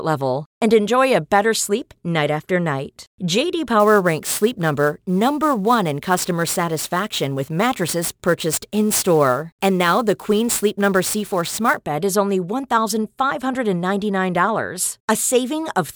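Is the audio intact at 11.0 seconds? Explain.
No. At 11.0 seconds the speech is affected by sample clock jitter, running from 3.80 to 11.80 s, just before "bed is only". The sampling instants wander by around 10 microseconds. Steep waveform slopes turn this into a hiss or roughness, roughly 15 dB below the speech.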